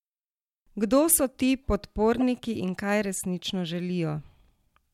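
At 1.12 s, just before "so ti", and again from 2.15 to 2.22 s, before "in kaj resnično", a corrupt frame decoded produces a brief chirp, squeak, blip or burst of noise. Damaged data was played as sound, not muted, so this is misplaced energy rather than a dropout. The errors peak around -20 dBFS, and the second event spans roughly two frames.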